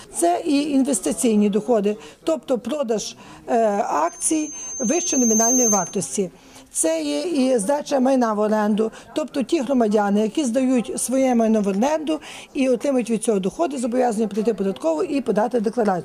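From 4.07 to 6.14 s, a loudspeaker feedback squeal: a 6.3 kHz tone self-reinforcing through a mic-speaker loop swells over about 1.5 s, unlike a steady whine.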